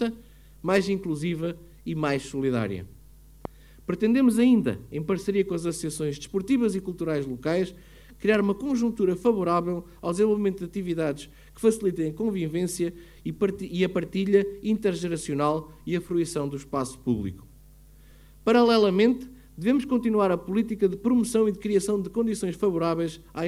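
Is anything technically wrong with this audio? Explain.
Yes, there's one loud pop at 3.45 to 3.47 s, a sharp click jumping roughly 10 dB above the sound, likely a voltage spike from a plug or switch.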